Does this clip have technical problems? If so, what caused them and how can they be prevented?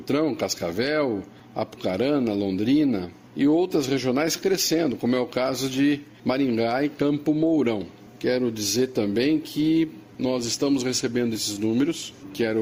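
Yes. Clock drift between sender and receiver runs through the whole clip: the sender's clock is slow by about 3 percent, so the receiver's jitter buffer keeps draining. On a waveform this appears as small uneven seams rather than any single obvious break. Locking both ends to a common clock, or using an adaptive resampler, prevents it.

Repeated timing corrections follow from that drift, from 0.32 s to 12.56 s. The receiver keeps repeating short pieces to cover the shortfall, so playback runs at 97 percent speed and gains roughly a third of a second overall. A spectrogram shows tiny duplicated slivers at irregular intervals. Smooth resampling instead of cut-and-repeat edits avoids them.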